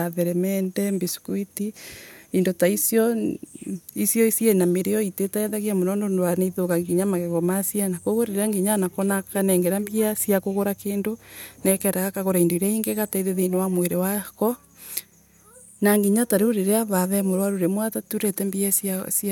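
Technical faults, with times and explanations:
15.51 to 16.05 s, drift correction step: the speech suddenly runs about 5.5% fast and rises nearly a semitone (92 cents), then snaps back to normal. This is likely clock-matching software briefly raising the playback rate to drain its buffer, shifting speed and pitch together.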